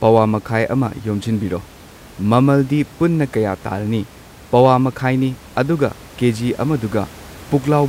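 Nothing in the speech recording points to a fault in the system. Background noise from the room sits about 23 dB below the speech and belongs to the recording itself.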